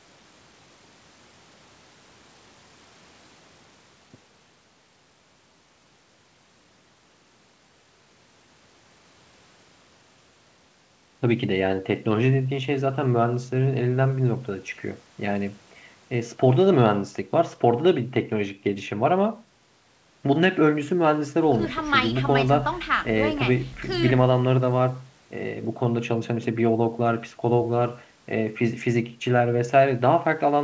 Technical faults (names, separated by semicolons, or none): none